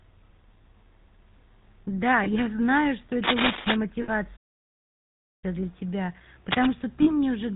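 Throughout the speech, the GSM full-rate codec is plainly audible: a buzzy, gravelly roughness from the coarse pulse excitation, with nothing above 4 kHz. That fits 13 kbps GSM rather than ordinary band-limiting, which would dull the sound without adding grit.

Lost GSM frames first appear at 0.62–0.65 s and 2.24–2.28 s, each a brief metallic ring where the last good frame was repeated, consistent with a single 20 ms frame. Unlike a dropout, the gap is filled with a held, ringing sound rather than silence.

From 3.23 to 3.76 s, cable scratch noise adds dense, uneven rustling a few dB above the speech, likely from a worn connector being moved. Its irregular, crackly texture sets it apart from steady hiss or the codec's constant buzz.

A longer frame loss at 4.02–4.09 s rings for about 60 ms, holding the sound for three frames' worth.

From 4.36 to 5.44 s, a playback stall cuts the speech dead for about 1.06 s before it resumes. 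There is true silence with no ringing or fade, which separates it from frame concealment.

A shorter scratch at 6.51–6.66 s sits at about the level of the speech. A final frame loss at 7.02–7.09 s rings for about 40 ms, consistent with two missing frames.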